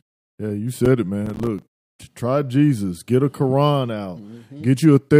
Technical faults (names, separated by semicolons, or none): processor overload crackle